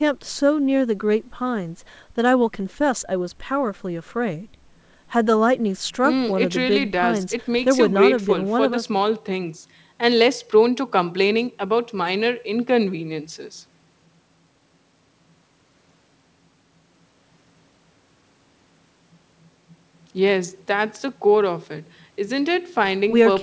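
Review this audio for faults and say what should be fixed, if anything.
Nothing needs fixing; no faults were found.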